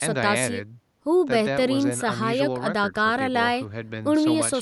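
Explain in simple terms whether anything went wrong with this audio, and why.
Nothing went wrong that I could hear; listening closely, nothing stood out, and the faint background noise is just the room the microphone was in.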